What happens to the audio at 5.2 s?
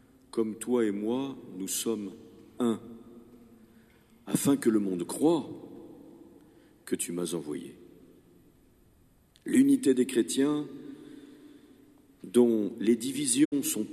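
Nothing goes wrong at 5.2 s; the audio passes through that moment intact, with no dropout, glitch or distortion.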